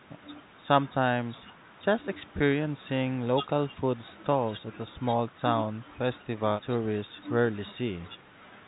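Nothing stood out on listening to this speech recording; its narrow telephone-band sound, with nothing above about 4 kHz, is what a normal G.711 call path produces.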